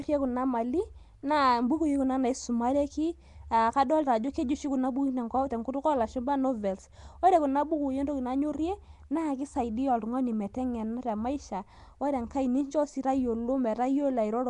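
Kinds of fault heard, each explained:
Nellymoser compression: rough, hissy, smeared speech with an underwater quality and nothing above 10.6 kHz, likely Flash's Nellymoser Asao codec replacing starved bands with noise.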